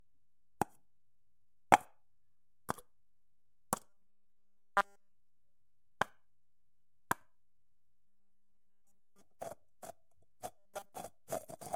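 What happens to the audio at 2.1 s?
Nothing goes wrong at 2.1 s; the audio plays through that moment intact, with no dropout, click or other fault.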